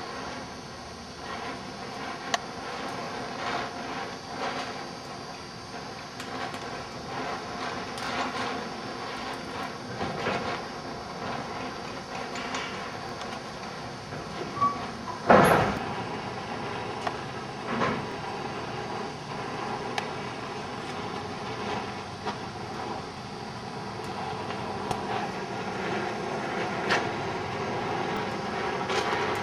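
Overlapping chunks at 3.04, 8.07, 13.09, 18.12, 23.14 and 28.17 s: each 5 s chunk restarts 25 ms early, replaying that slice as a click-like stutter. It shows as a duplicated waveform segment and a thin vertical seam on the spectrogram.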